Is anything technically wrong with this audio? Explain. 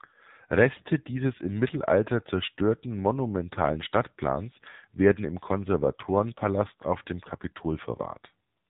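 Yes. Throughout the speech, the AMR narrowband mobile codec is plainly audible. Nothing above 4 kHz survives, and the voice sounds buzzy and synthetic because it is rebuilt from a vocal-tract model driven by sparse pulses, which fits a low mode around 7.4 kbps. Unlike a simple telephone-band filter, this adds artificial buzz rather than only dulling the top end.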